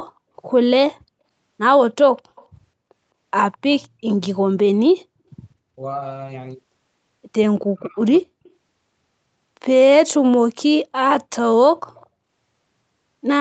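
At 2.17 to 2.46 s a faint delayed copy of the speech appears, roughly 30 dB below the direct signal and trailing it by 209 ms. This is an echo leak, likely from a far-end loudspeaker whose echo canceller let part of the microphone pickup through. Shorter scraps of the same echo, at the same 209 ms lag, follow at 3.52 to 3.58 s and 3.76 to 3.87 s, the second lower at roughly 35 dB down.

From 7.63 to 8.3 s the speech is suppressed in double talk. The level dips in pieces, falling by as much as about 40 dB, and around half a second of the span is affected. This is likely the echo canceller failing to separate the local talker from loudspeaker echo while both sides spoke, so it turned everything down.

Two more echo-leak scraps follow at 8.44 to 8.5 s and 11.95 to 12.07 s, each roughly 35 dB down at the 209 ms delay. Like the rest of the clip, they sit within the band that ends at 8 kHz on the call path.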